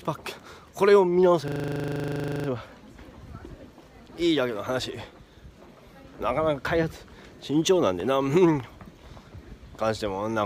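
From 1.48 to 2.48 s there's a system hang loop: the machine stalled while the sound hardware kept replaying one 40 ms slice of its buffer. You hear a rattly 25 Hz buzz for a second, then the audio picks up with essentially nothing lost.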